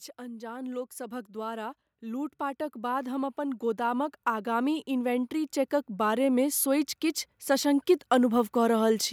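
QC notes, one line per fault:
0.16 to 6.94 s, automatic gain rising: the level climbs steadily by about 14 dB as the gain control, finding the input too quiet, keeps turning itself up, so the speech and the background noise swell together. On a waveform the envelope widens gradually; a spectrogram brightens across all frequencies at once.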